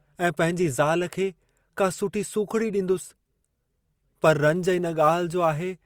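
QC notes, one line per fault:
4.23–5.86 s, sample clock jitter: an unstable converter clock of a few microseconds adds hiss-like roughness, around 35 dB below the speech, strongest on loud, bright sounds.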